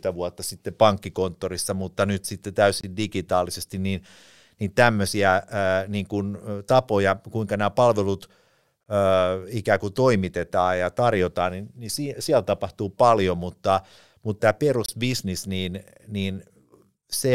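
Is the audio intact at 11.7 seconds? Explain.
Yes, the audio is intact at 11.7 seconds, with no dropout, click, distortion or other fault to be heard at that moment.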